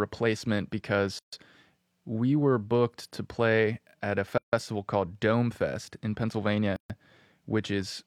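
At 1.19 s, after "to play at a" at 4.38 s, and at 6.76 s, the speech drops out for 137 to 152 ms. These are gaps at a join of encoded pieces: untrimmed encoder delay and end padding leave short silences with smeared edges before the speech resumes.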